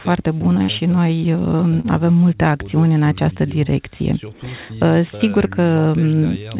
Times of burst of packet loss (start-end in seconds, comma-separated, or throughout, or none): 0.62-0.70